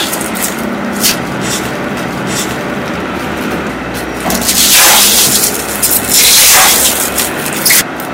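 Hard clipping runs through the whole audio. It is driven about 29 dB past full scale, so roughly a tenth of samples are flattened. Every loud sound becomes harsh fuzz.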